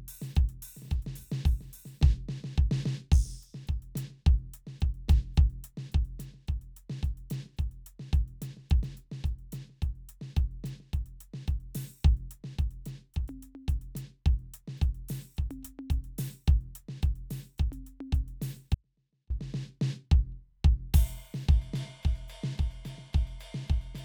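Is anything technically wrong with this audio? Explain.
Yes. There is an audio dropout to a faint residue in the music from 18.75 to 19.30 s. The likely cause is a brief loss of the wanted signal while the path after the break stayed live, so the output never went fully silent. For about 0.56 s the music abruptly drops to a faint leak roughly 40 dB below its normal level, then snaps back mid-flow, with none of the gradual shape of a pause or fade.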